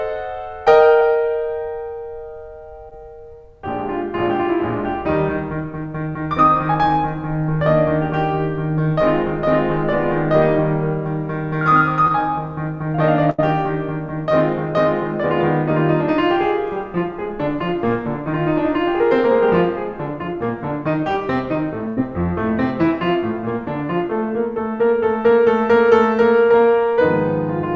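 A music recording carried over a call link, with audio that stops at 8 kHz, consistent with G.722 at 64 kbps. Short concealed packet loss appears at 1.00–1.03, 2.89–2.93 and 12.07–12.12 s: about 20 ms of audio never arrived, and the receiver extended the preceding sound, leaving brief smears or wobbles. A burst of packet loss hits 13.30–13.40 and 21.88–21.99 s, where roughly 80 ms went missing; the gap is bridged by a fading held buzz or hiss before the music resumes further along.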